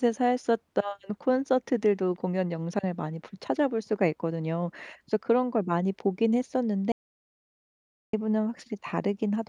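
At 6.92 s the speech drops out to dead silence until 8.13 s, about 1.2 s gone with no room tone, likely a lost input feed.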